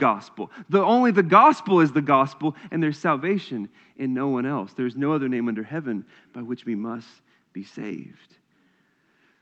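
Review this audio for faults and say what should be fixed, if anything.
No faults to report, so nothing needs fixing.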